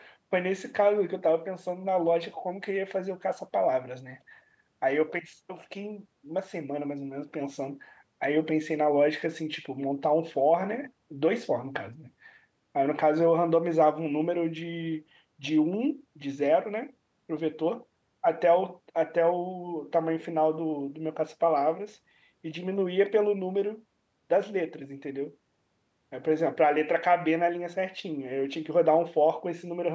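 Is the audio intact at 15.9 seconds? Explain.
Yes, the audio is intact at 15.9 seconds: the speech there carries no fault, only the normal call microphone processing, which trims the lowest bass and leaves nothing above 8 kHz.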